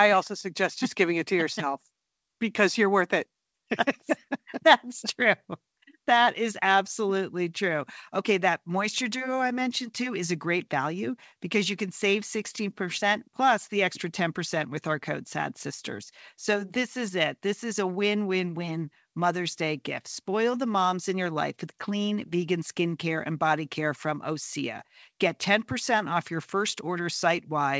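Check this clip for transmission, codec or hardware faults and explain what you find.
No faults found; the speech tops out at 8 kHz, as expected from a wideband call codec such as G.722, and carries the normal bass low-cut of the call's microphone processing.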